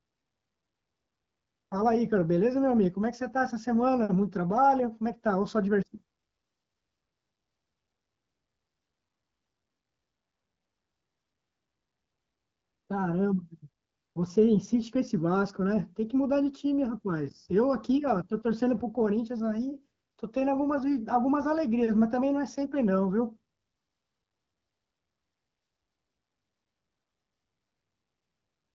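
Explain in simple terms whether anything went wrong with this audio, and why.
Nothing went wrong here.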